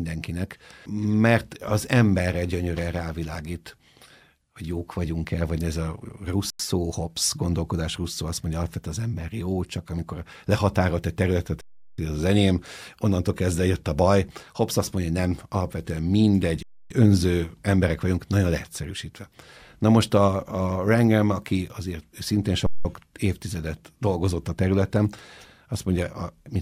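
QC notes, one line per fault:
6.50–6.60 s, 11.61–11.98 s, 16.63–16.90 s and 22.66–22.85 s: underrun with held sample. The output buffer ran dry four times, for about 93, 372, 279 and 186 ms, and the converter held its last value each time, so the waveform sits flat. The sound simply stops instead of clicking in, then resumes right where it left off with nothing missing. That makes the restart soft. The stops come just after "el vagy ez a", "amikor lehatárolt egy területet" and "mondja nem alapvetően mindegy". The gap lengths fit whole multiples of a 4096-sample buffer.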